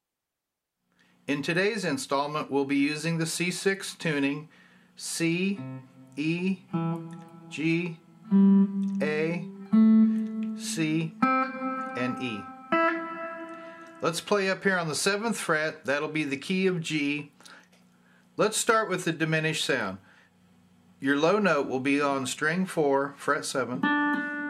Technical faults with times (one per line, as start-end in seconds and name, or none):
0.93-1.10 loose connector crackle